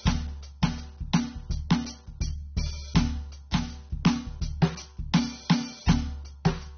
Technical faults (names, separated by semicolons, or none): AAC compression